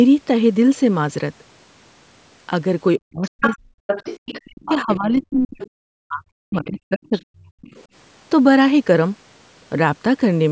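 From 2.98 to 3.77 s, 4.42 to 5.61 s and 6.05 to 7.64 s the speech is suppressed in double talk. The level drops by as much as about 40 dB in pieces, roughly half a second of the first span and about a second of each later one, likely because the echo canceller ducked everything while both sides spoke. The other side's voice leaks through from 3.41 to 4.97 s at about 5 dB below the speech, then in shorter, fainter scraps at 5.41 to 5.69 s, 7.16 to 7.20 s and 7.65 to 7.84 s, down to about 30 dB below. This is likely loudspeaker echo the canceller failed to remove.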